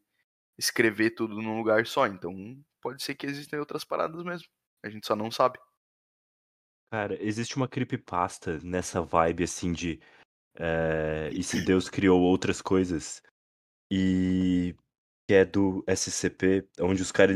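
No audible faults turn up anywhere in the recording, with nothing on the signal path calling for comment.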